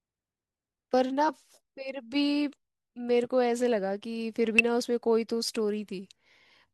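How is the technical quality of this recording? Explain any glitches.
Two brief glitches mar the speech: a short glitch at 1.28 s and a similar blip from 4.59 to 4.61 s. Both come from damaged data in a compressed stream. Corrupted bytes left the decoder unable to read those frames correctly, so it lost sync while it hunted for the next valid frame header.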